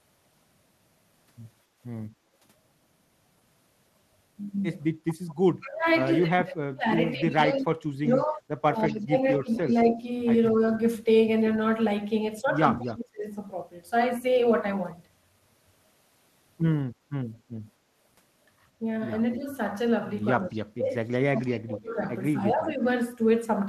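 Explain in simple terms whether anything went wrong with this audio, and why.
Several things went wrong, all tied to the system that removes echo on a speakerphone call.

At 1.64 to 1.78 s there is background gated by the echo canceller. The room sound briefly sinks and then comes back. The canceller turned the microphone down while the loudspeaker was playing.

There is also an echo leak. A faint copy of the speech returns about 0.21 seconds late. It is heard at 5.1 to 5.35 s, 7.58 to 9.81 s, 12.87 to 12.92 s and 19.31 to 21.56 s. The likely cause is a speakerphone whose canceller missed part of its own loudspeaker sound.

Finally, there is speech suppressed in double talk. The speech drops sharply or cuts out in pieces at 5.61 to 10.54 s, 12.77 to 13.27 s and 19.36 to 22.85 s. These stretches overlap the echo. It is likely that both sides talked at once, so the canceller turned down its own talker along with the echo.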